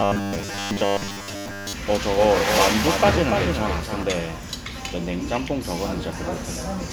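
From 0.01 to 1.73 s there's robotic sound from repeated short buffers: a rigid 100 Hz buzz, likely from a 10 ms chunk replayed while most of the real audio gets skipped. Then from 1.93 to 4.03 s a doubled audio track kicks in, a dry copy roughly a third of a second behind and about 5 dB quieter, likely a second capture path, starting and stopping abruptly.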